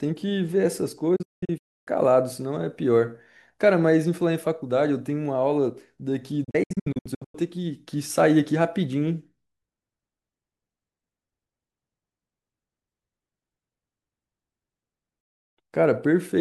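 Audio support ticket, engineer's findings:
Digital broadcast dropout, receiver muting on lost or corrupt frames, speech audio. 1.16 to 1.88 s: several short holes over about 0.7 s, about 0.54 s missing, longest gap 0.29 s, 8 ms fade into each mute. 6.44 to 7.35 s: choppier, about 0.48 s lost across 0.9 s, no hole over 0.1 s. 15.21 to 15.58 s: about 0.35 s silenced. Gap lengths fit 32 ms frames; content sent during muting is gone.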